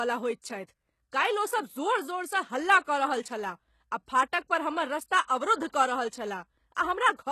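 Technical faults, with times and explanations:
Throughout, HE-AAC compression: s sounds are gritty and metallic with a lispy edge, likely from spectral band replication rebuilding the treble from copied lower bands, which fits a bitrate near 16 kbps. A spectrogram shows smeared, repeated-looking upper bands ending sharply at 12.3 kHz.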